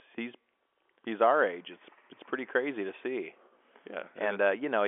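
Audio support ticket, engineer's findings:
No faults found; the speech sits in a telephone band of about 300 Hz to 3.4 kHz, which fits a 64 kbps G.711 mu-law line path, with any coding noise at most faint.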